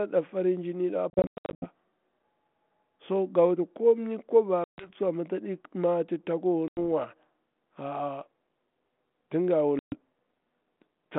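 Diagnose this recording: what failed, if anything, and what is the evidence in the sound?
Packet loss on an ADPCM call, at the network stage. After "farin jinin da" the sound breaks up between 1.1 and 1.69 s: about 370 ms goes missing in hard-edged silent holes spread over 520 ms, the longest about 100 ms. Further dropouts follow at 4.64 to 4.90 s (140 ms, ending just before "tsuwa amma"), 6.68 to 6.78 s (90 ms) and 9.79 to 9.98 s (130 ms). The narrow 150 Hz to 3.5 kHz band fits a G.726 link. When packets are lost, the decoder's adaptive predictor and step size drift away from the sender's. Each gap therefore returns with a click, a wrong level or brief distortion before it resynchronises.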